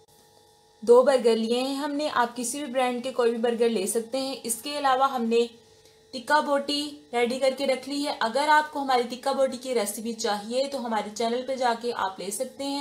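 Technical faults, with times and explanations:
No technical faults can be heard in this clip.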